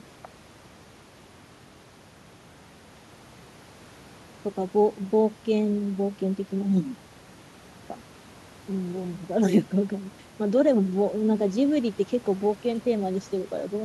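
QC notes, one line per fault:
Nothing to flag here; the speech comes through without any problems I could hear.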